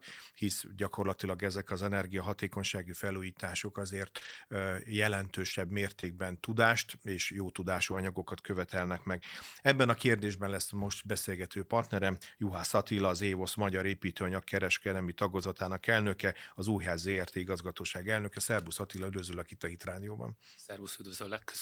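Brief rough, noisy patches break up this speech recording. They come right after "hisz gyakorlatilag" at 1.57 s, then at 4.21–4.35 s, just before "tudást és jó" at 6.03 s, before "anyagokat követelnek meg" at 7.91–7.97 s, and at 10.83 s, 15.43 s and 17.11–17.21 s. These are lost packets rebuilt from error correction: the decoder played low-bitrate copies carried in the following packets, so there is no gap, just a coarser 20 to 80 ms stretch. At 4.17–4.23 s and 6.01–6.05 s a short smear or wobble replaces the audio, a short concealed packet loss where 20 to 40 ms arrived too late and the receiver extended the preceding sound before blending back in.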